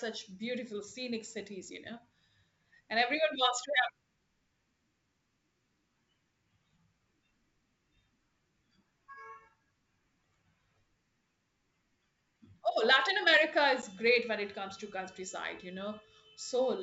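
At 13.82 to 13.84 s, packet loss on an ADPCM call drops about one packet, 10 ms, leaving a hard-edged silent gap before the decoder resynchronises, with the speech returning slightly distorted.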